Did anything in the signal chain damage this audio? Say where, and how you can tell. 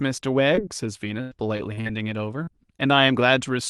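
Yes. Short concealed packet loss in the network and jitter-buffer stage: at 0.55–0.59 s, 2.43–2.49 s and 2.77–2.81 s, about 20, 40 and 20 ms of audio arrived too late. The decoder extended the preceding sound across each hole, heard as a brief smear or wobble.

Repeated packet loss (robotic sound) from 1.21 to 1.87 s: four gaps totalling about 200 ms, the longest about 100 ms, so roughly a third of that stretch is synthesized. Each patch continues the last sound before the next loss hits, producing choppy speech with pieces missing.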